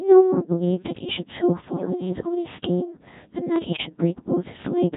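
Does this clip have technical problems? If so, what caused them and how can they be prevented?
Yes. The whole clip runs through the Codec 2 vocoder. The voice is rebuilt from sine waves using only pitch, voicing, level and a spectral envelope. So it sounds robotic and buzzy throughout, and the damage is heavy. That fits a very low rate of about 1.6 kbit/s. To prevent this, record or send the speech with a higher-rate waveform codec wherever the link allows.

Bit errors on digital voice radio strike twice, from 1.76 to 1.90 s and from 3.56 to 3.86 s. Flipped bits corrupt the vocoder's frame settings. The voice lurches in pitch, level and tone and breaks into warbling gibberish. The error rate sounds like a few percent, with the first burst worse. To prevent this, keep the radio well inside coverage or use stronger error protection on the link.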